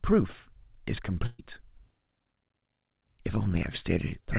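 At 1.26 s the speech stops moving forward: the last sound is stretched and fades for about 120 ms, and at 1.40 s the speech picks up again slightly further along, with a short stretch simply absent. This is a burst of packet loss. Consecutive packets never arrived in time, so the receiver kept extending and attenuating the final sound it had, then resumed past the missing audio. The whole clip sits below 4 kHz, consistent with a narrowband call codec.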